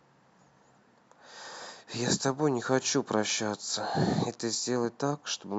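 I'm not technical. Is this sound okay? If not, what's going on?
Yes, this sound is okay; nothing is going wrong with it.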